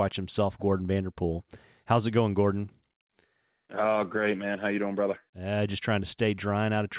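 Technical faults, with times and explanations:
No technical faults are audible anywhere in this speech.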